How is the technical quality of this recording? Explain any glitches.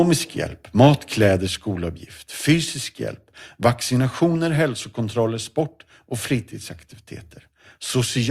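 Two glitches stand out, both early in the speech.

From 0.80 to 0.87 s there is microphone overload: peaks go about 3 dB past full scale and around 7 percent of samples are flattened. This is likely from input gain set too high, so the converter clips the waveform tops, giving a short harsh crackle.

At 1.47 s the microphone volume is stepped down: the voice and the background drop together by about 5 dB in one abrupt step. This is likely the call software reacting to the overload a moment earlier by lowering the device input gain.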